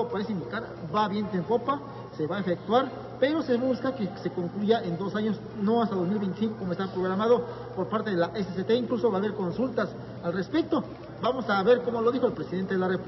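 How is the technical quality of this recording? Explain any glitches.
Nothing stood out on listening; no glitches were heard anywhere in the recording.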